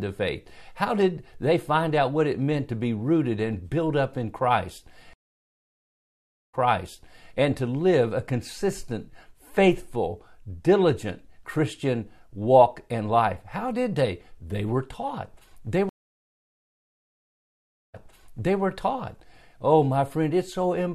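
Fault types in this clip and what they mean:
Stream reconnect: the link dropped and a new decoder restarted mid-stream, leaving flat gaps of about 1.4 s and 2.0 s; playback resumes roughly 0.7 s earlier, repeating audio, with "and to live a" just after the first gap, with blank waveform and spectrogram during silence.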